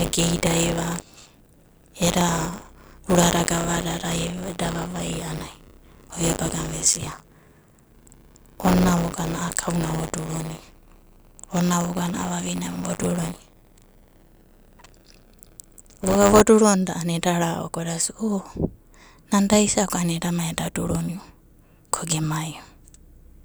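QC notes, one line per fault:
0.0–16.4 s, buffer tearing: a rattling robotic buzz at 100 Hz rides on the speech wherever there is signal. The write and read positions have slipped and cross in every period, so about a tenth of each buffer replays audio from roughly 40 ms earlier, with hard joins on both sides.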